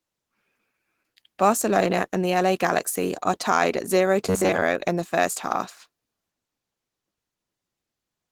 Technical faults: Opus voice compression; robotic sound from repeated short buffers

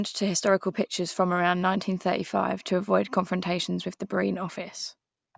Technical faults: none

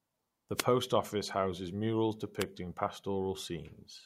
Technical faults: wireless microphone noise hit

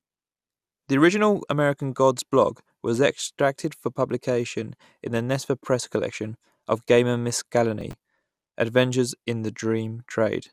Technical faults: processor overload crackle

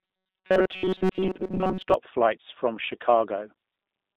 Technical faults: G.729 codec; robotic sound from repeated short buffers

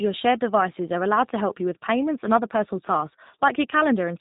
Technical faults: G.729 codec

